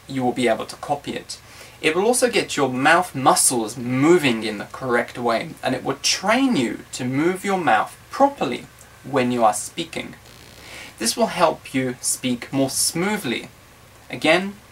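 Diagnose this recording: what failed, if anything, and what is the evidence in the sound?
Computer activity noise in the analogue wiring: from 9.2 s to the end, a buzz pulsing around 70 Hz, roughly 35 dB under the signal, rides shared-ground load changes, unlike steady mains hum.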